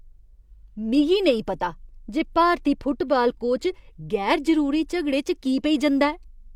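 No technical faults can be heard anywhere in the speech.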